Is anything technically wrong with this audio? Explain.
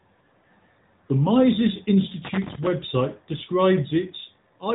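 Yes. Throughout, the speech sounds narrow and plainly buzzy, with nothing above about 3.8 kHz: AMR narrowband mobile codec damage, whose low bit budget fits a mid-rate mode around 10 kbps.

From 2.25 to 2.67 s, an irregular scratchy burst cuts through the speech: loose connector crackle, where a worn contact rapidly makes and breaks the signal path.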